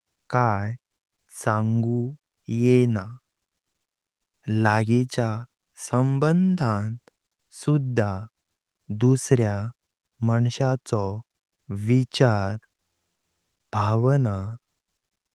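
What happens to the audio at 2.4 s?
Nothing goes wrong at 2.4 s: the speech passes through intact, carrying only the ordinary coding character of the call path at that point.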